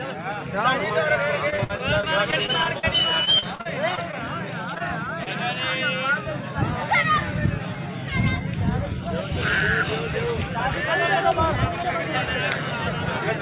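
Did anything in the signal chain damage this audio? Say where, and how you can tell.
Yes. The damage happened at the network stage, upstream of a G.711 A-law call path whose band stops at 4 kHz. From 1.5 to 2.85 s and again from 3.25 to 4.17 s there is repeated packet loss with a robotic sound. The first stretch has nine dropouts, the longest 58 ms, and about 16% of it is concealed. The second has six, the longest 42 ms, and about 19% is concealed. Each hole is papered over by extending the last sound, so the audio turns choppy. On a spectrogram this shows as repeated, smeared vertical bands of frozen harmonics. The waveform shows short runs of suspiciously periodic, repeated cycles.

Three single events of short concealed packet loss follow, each about 20 ms missing. The first two run back to back from 4.74 to 4.82 s, and the third is at 5.24 to 5.28 s. The receiver filled each hole with a short continuation of the preceding sound and then blended back into the real signal. 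They are audible as brief smears or wobbles. On a spectrogram each looks like a narrow stretch where fine detail blurs into a copy of what came just before.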